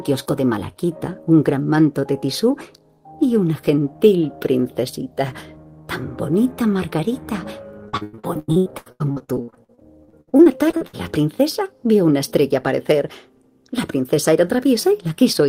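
From about 7.89 to 10.95 s there's a burst of repeated packet loss, giving that robotic sound. Short holes keep landing one after another, the longest around 97 ms, and each gets papered over by stretching the last bit of audio. Roughly 41% of that stretch is patched-in filler, so it comes across choppy, with chunks missing.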